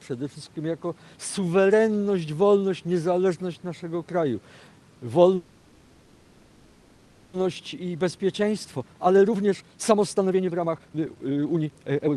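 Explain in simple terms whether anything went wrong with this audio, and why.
Two things go wrong in this call audio. From 5.35 to 7.35 s the sound stalls: the last bit of audio is stretched into a fading buzz or hiss for about two seconds, then the audio picks up exactly where it left off. This is a call audio freeze. Its likely cause is network packets held up on the way, so the receiver's jitter buffer ran empty and had to fill the gap until they arrived. Nothing is lost; the rest of the call is simply pushed about two seconds later.

From 7.53 s to the end, the audio runs noticeably faster, at about 139% of normal speed, yet the pitch stays the same, so it sounds hurried rather than squeaky. This is a jitter buffer speed-up. After the freeze, the delayed audio arrived at once and left the buffer holding too much. To catch up, the receiver repeatedly cut out tiny slices of sound, roughly two seconds in total, and removed the delay the freeze had added.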